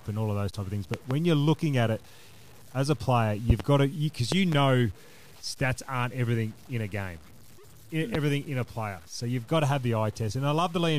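Speech, with grainy low bit depth without dither throughout. Quiet passages turn gritty, with error noise roughly 30 dB below the speech. This likely comes from truncation to 7 bits. Loud pops strike at 0.94–1.14 s after "those type of things", at 3.50–3.62 s after "as a player", at 4.32–4.55 s, and at 8.15–8.17 s before "in a player". The first three are double pops. They peak roughly 15 dB above the speech, likely from electrical transients.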